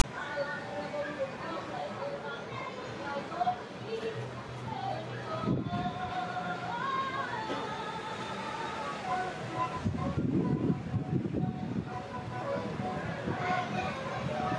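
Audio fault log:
0.00–0.04 s, file tags played as audio: the player read a block of text tags at the head of the file as though it were samples. The character bytes come out as a loud, hard-edged rasp offset to one side, and the zero padding after them falls to silence.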